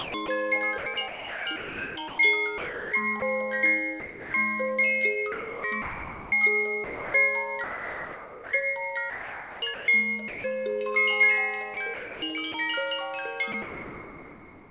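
From 0.0 to 3.22 s the sound is chopped by the voice detector. Real sound keeps cutting out. Comfort noise fills about 1.5 s of the gaps. The likely cause is the sender's detector switching on and off.

From 4.0 to 4.34 s the sound is dropped by the voice detector. Quiet sound was likely taken for background. For 340 ms it gives way to steady comfort noise, then returns.

The same chopping comes back at 5.32 to 6.32 s, 6.84 to 8.52 s, 9.1 to 10.44 s, 11.74 to 12.54 s and 13.52 s to the end. Each time comfort noise replaces between 320 ms and 1.18 s of real sound.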